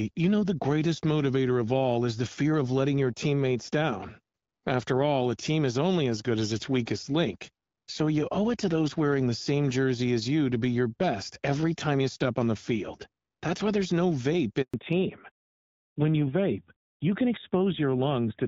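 At 14.62 s, just after "why there's no vape", the call hits a handover gap. The phone switches networks, and no speech frames arrive during the move. The speech fades out within a few tens of milliseconds. Then there is silence for about 120 ms, until 14.74 s. Whatever was said in that window is lost. The cut is clean, with no noise filling it.

From 14.74 s to the end, the call shows a fallback to narrowband. After the handover, the link drops from HD Voice to an older narrowband codec. Nothing above 4 kHz survives. The wideband coding before this point sounds lightly coded and clear, which suggests a mid-range HD Voice mode. After the switch, the speech turns dull and boxy. Sibilants lose their edge, and a rougher, buzzier texture appears, consistent with a low narrowband rate near 7.4 kbit/s.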